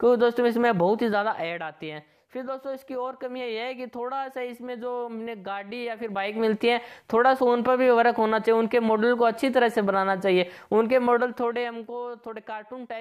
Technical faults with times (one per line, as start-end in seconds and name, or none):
0.98-1.66 zipper noise
5.93-6.53 zipper noise
11.09-11.95 zipper noise